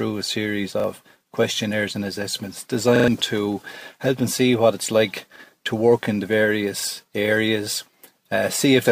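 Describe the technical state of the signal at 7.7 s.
At 7.7 s the signal is intact, with no audible fault at that moment.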